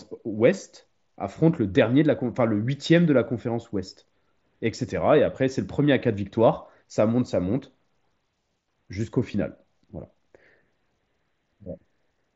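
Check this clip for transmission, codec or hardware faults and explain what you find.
One transmission fault appears, with the mSBC Bluetooth headset codec carrying speech up to 8 kHz underneath. At 9.34 s there is concealed Bluetooth headset packet loss: about 7.5 ms went missing, which fits a single lost packet. The receiver bridged the gap with a matching stretch of recent waveform, so it is nearly hidden, with no silent gap or click as in a plain dropout.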